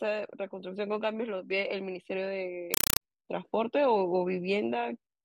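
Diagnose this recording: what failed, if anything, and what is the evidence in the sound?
From 2.74 to 3.01 s the speech is replaced by very loud, harsh static that chatters at a steady 31.25 bursts per second, each burst about 4 ms of noise followed by silence. This is a compressed stream played as audio at the playback stage, on the digital link. An encoded Dolby Digital bitstream, consistent with AC-3 at around 192 kbps, was passed out as though it were PCM samples instead of being decoded. Each frame's data therefore sounds as a noise burst, and the padding between frames sounds as gaps.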